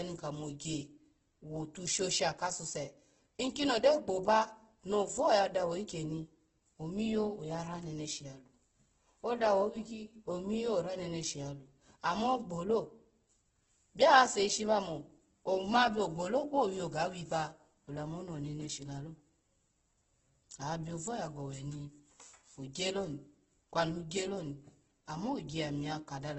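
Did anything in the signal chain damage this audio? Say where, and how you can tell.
Yes, the codec stage, and it runs the whole clip. The speech comes out rough and grainy, with a noisy fizz where clean tone should be, and nothing at all above 8.1 kHz. That points to heavy Opus compression, likely in its music (CELT) mode at a very low rate, which fits something around 12 kbps. Short on bits, the encoder keeps each band's energy but fills the detail with folded or noise content, so you get grit instead of holes.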